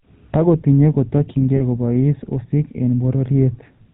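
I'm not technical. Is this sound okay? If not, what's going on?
No. GSM full-rate codec, throughout: an old phone-network coder rebuilds the speech from a rough model, losing everything above 4 kHz and leaving a buzzy, gravelly edge. Lost GSM frames, 1.56 to 1.61 s: a brief dropout was papered over by repeating the last good sound, so it rings metallically for a moment.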